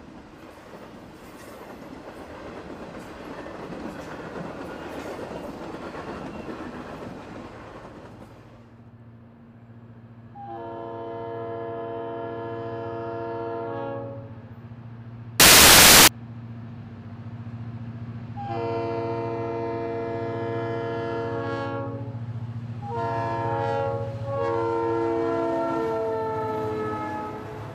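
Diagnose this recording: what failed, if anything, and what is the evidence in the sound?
The sample-format conversion stage failed. From 15.40 to 16.08 s the audio turns into loud, harsh broadband noise, with samples built from the wrong bytes. The low, fast-changing bits land in the high part of each value.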